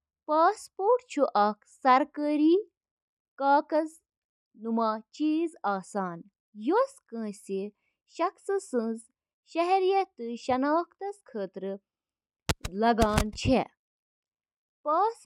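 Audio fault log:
Nothing in this speech recording stood out on listening.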